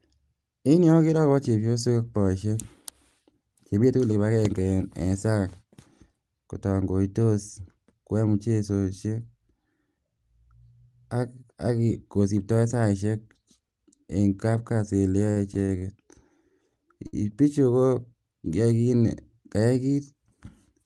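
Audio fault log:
15.30–15.83 s, repeated stalls (stutter): the speech drags and stutters through four held gaps totalling 136 ms, longest 58 ms. Late packets repeatedly emptied the jitter buffer, and nothing is lost.
17.07–17.14 s, short stall from a late packet: a sound is held about 60 ms too long just before "bichu ko". A packet arrived late, so the receiver stretched the last sound until it came.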